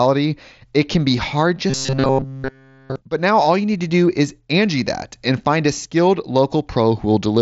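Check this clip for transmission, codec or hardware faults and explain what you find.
One fault is present. From 1.7 to 2.96 s, right after "it can be hard", playback likely starved and repeated a short buffer of about 7.5 ms throughout. This is robotic sound from repeated short buffers: a rigid, metallic 134 Hz buzz loosely tracking the speech, which is band-limited to 7.7 kHz by the mSBC headset link.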